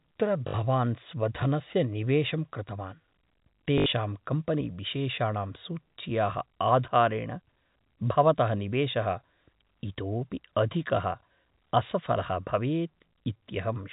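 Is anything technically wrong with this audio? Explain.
Yes, there's packet loss with the last packet repeated, at 0.48 to 0.54 s just before "स्वधनस्य निवेशं" and at 3.78 to 3.86 s just before "कम्पनीविशेषाणां सूच्याः". Those are 60 ms and 80 ms gaps, which fits about three and four 20 ms packets. The receiver replayed the last packet to fill each gap, so you hear a brief buzzy robotic stutter. The 4 kHz telephone bandwidth from the G.711 coding comes through as you'd expect.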